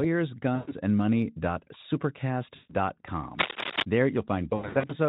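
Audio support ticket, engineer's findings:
VoIP packet loss concealed by the speech codec. 0.55–0.74 s: speech smears into a fading buzzy tone or coloured noise, about 120 ms missing. 2.55–2.75 s: same symptom, about 140 ms. 4.49–4.95 s: repeated short concealed gaps. Around 240 ms lost, scattered over 400 ms, longest gap 80 ms. Gap lengths fit 20 ms frames. Mechanism: Speex decoder repeats last pitch and filter with falling gain. Recovery is weak for a moment after packets resume. Baseline Speex coding itself sounds clean.

Cable scratch noise. 3.39–3.83 s. Dense, uneven scratching bursts over the speech, roughly as loud as the speech itself. Likely a worn cable, connector or control being moved. Contact resistance jumps rapidly and injects noise. Reseat or replace the mic lead and check connectors.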